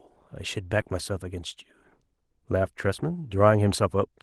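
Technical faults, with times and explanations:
0.81–0.86 s, short concealed packet loss: about 40 ms of the call's audio reached the decoder too late to use, so the receiver filled the gap by extending the preceding sound, repeating its pitch if it was voiced or shaping noise if it was not, then cross-fading back into the real signal. That invented patch is heard as a brief smear or wobble in the speech, and a short consonant in that gap can drop out entirely.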